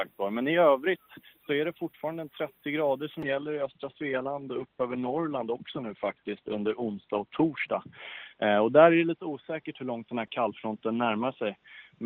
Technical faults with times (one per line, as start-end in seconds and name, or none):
3.23-12.05 call bitrate drop